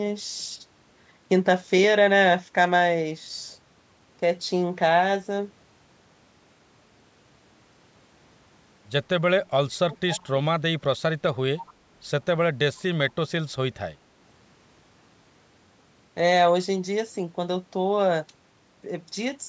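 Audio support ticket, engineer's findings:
Speech dropping out 9.29–11.01 s, deepest dip about 40 dB, roughly a second and a half affected. Likely speech suppressed in double talk. Echo canceller ducking both sides at once.

Faint delayed repeat 11.57–11.71 s, 141 ms behind, about 20 dB down. Likely echo leak. Far-end loudspeaker pickup not fully cancelled, returned down the line.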